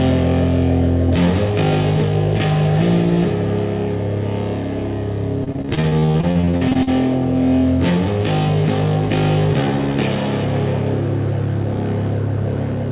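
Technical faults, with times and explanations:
5.44–6.89 s, repeated packet loss (robotic sound): about a third of this stretch is lost in gaps up to 40 ms, each patched by repeating prior sound, giving choppy, robotic audio.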